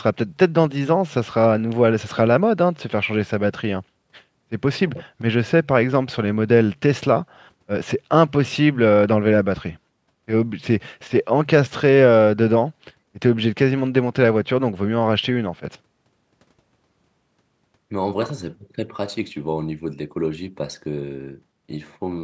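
No technical faults can be heard anywhere in the speech.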